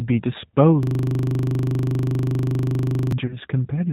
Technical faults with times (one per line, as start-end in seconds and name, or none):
0.00-3.92 G.729 codec
0.83-3.12 system hang loop
3.26-3.37 VoIP packet loss concealed by the speech codec